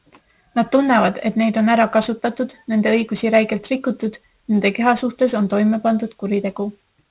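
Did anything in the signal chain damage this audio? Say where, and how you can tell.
Yes. Aliasing runs throughout the speech, introduced at sample-rate conversion from 44.1 kHz down to 8 kHz with no anti-alias filter. Sibilants sound gritty and metallic, with folded energy roughly 25 dB below the signal. A spectrogram shows content mirrored about 4 kHz and running hard to that edge.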